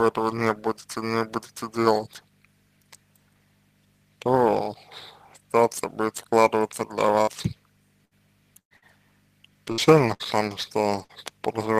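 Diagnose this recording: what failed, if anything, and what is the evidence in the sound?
Network stage, burst of packet loss at 7.21, 8.05, 8.59, 8.77, 9.72, 10.14 and 11.04 s: roughly 60 ms gaps (120 ms at 8.59 s) filled by fading held sound, showing as smeared decaying bands, then abrupt resumption.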